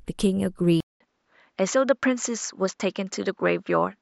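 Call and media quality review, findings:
Speech turns duller at 0.80 s after a 200 ms dropout at the changeover, lasting to the end. Nothing above 7.6 kHz from there on. Level unchanged, faint new noise floor far below the speech. Likely input switched to a poorer device: a narrower-band microphone path took over capture.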